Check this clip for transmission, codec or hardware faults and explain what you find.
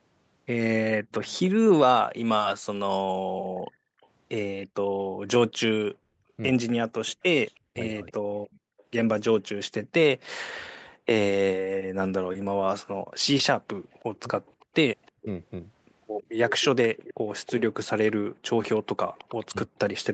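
The clip has three kinds of call-processing fault, all tied to echo cancellation. The audio tops out near 8 kHz, which points to a wideband call path.

Echo leak: From 1.11 to 8.83 s and again from 13.37 to 20.04 s, a faint copy of the speech trails the original by 321 ms. It sits about 25 dB down at first, then about 20 dB down. The likely cause is a loudspeaker on the far side whose echo canceller let residue through.

Background gated by the echo canceller: Between 3.34 and 8.78 s, the room sound drops out in short bursts totalling about a second. The drops reach about 40 dB. Brief dips follow at 13.0 to 13.11 s and 18.29 to 18.44 s. The canceller clamped the microphone while the loudspeaker played.

Speech suppressed in double talk: From 7.71 to 11.03 s, the speech dips and breaks up for roughly a second in total, by around 40 dB at worst. A shorter dip follows at 19.45 to 19.72 s. 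Both sides were likely talking at once, and the canceller turned everything down.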